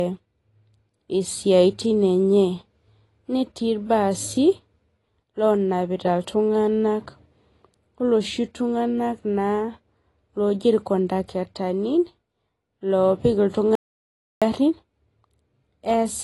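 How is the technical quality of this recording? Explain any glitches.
Technical quality is fairly poor. There are two problems: codec damage runs through the whole clip, and there's one short dropout near the end.

Throughout, you can hear what sounds like AAC compression, likely AAC-LC at a low bitrate, around 32 kbps. Nothing comes through above about 11.5 kHz, so the speech sounds dull. The encoder's coarse quantisation leaves a smeared, warbly, fizzy texture on sibilants.

From 13.75 to 14.42 s there's an audio dropout to silence. About 0.66 s goes to silence, with no room tone at all. That likely means the input was briefly lost while recording carried on. The speech cuts off mid-flow, and whatever was said there is gone.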